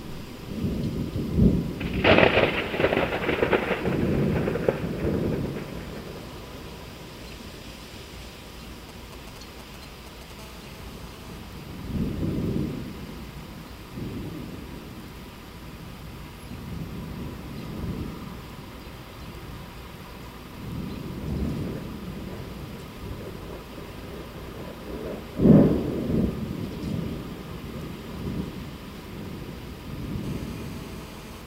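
GSM signalling bursts, from 8.89 to 10.32 s: a nearby 2G phone sends brief clusters of radio bursts while signalling, and the audio circuit rectifies them. The result is a galloping dit-dit-dit of short buzzes at 217 Hz, sitting roughly 15 dB below the sound.

GSM phone buzz, from 10.39 to 11.39 s and again from 30.24 to 31.42 s: the phone is now in a call and transmitting 217 bursts per second. The rectified pulses produce a steady, raspy 217 Hz buzz rich in harmonics, unrelated to the sound, at about 22 dB and then about 20 dB below it.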